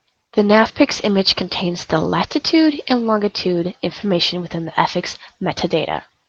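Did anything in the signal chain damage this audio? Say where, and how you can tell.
No, nothing in the signal chain damaged this audio.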